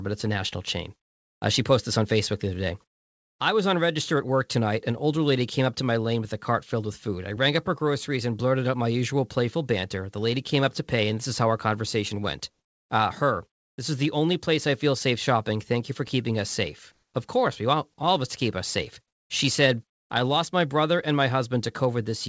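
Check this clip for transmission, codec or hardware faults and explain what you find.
One fault recurs in this speech clip: comfort noise in place of the background, at three points. The call path's G.722-style coding can be heard as nothing above 8 kHz. The first gap runs from 1.02 to 1.42 s, right after "it's a national chain". The second runs from 13.52 to 13.78 s. The third runs from 16.92 to 17.14 s, after "for keeping us safe". In each gap the real room background disappears and a flat, featureless hiss takes over. Its level shifts by about 8 dB, 13 dB and 1 dB respectively. The likely cause is discontinuous transmission: the sender stops sending during pauses, and the receiver fills the silence with synthetic noise.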